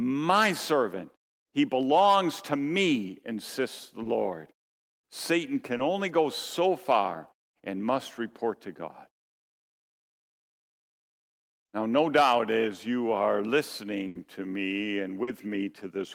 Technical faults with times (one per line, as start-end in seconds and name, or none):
4.03-4.07 short concealed packet loss
5.77-5.81 short concealed packet loss
14.07-14.17 burst of packet loss
15.23-15.29 short concealed packet loss